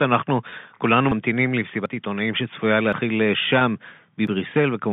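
Telephone-band speech, limited to roughly 150 Hz to 3.6 kHz by G.711 coding, briefly holds a slightly buzzy, frozen tone at 0.50 s and 3.59 s, each lasting about 20 ms. That is packet loss with pitch repetition, where the receiver loops the last pitch period to cover what fits a single lost packet. Skips forward come at 1.12, 1.86, 2.93 and 4.27 s, likely from a dropped buffer (overrun), with about a tenth of a second of audio missing at the first and third and about half that at the others.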